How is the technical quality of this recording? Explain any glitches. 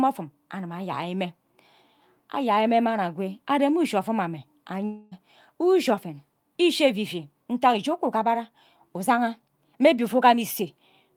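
The speech has one glitch. From 4.85 to 5.13 s the sound smears into a fading buzzy hiss for about a quarter second, then resumes with a jump. This is likely a long network dropout: packets stopped arriving, the receiver stretched the last sound to fill roughly 260 ms, and that span of real audio was lost.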